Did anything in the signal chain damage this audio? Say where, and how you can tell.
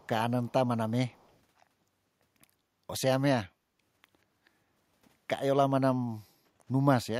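Yes, an echo leak in the call processing. Faint delayed copies of the speech, lagging about 181 ms and sitting far below it, surface at 0 to 0.08, 0.48 to 0.52 and 1.09 to 1.37 s. It's likely a far-end echo canceller letting loudspeaker pickup slip back.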